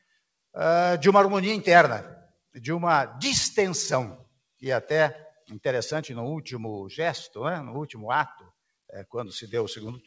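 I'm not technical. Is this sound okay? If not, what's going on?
Yes, this sound is fine: it came through an ordinary call connection, which keeps nothing above 8 kHz, so it sounds a little duller than a studio recording.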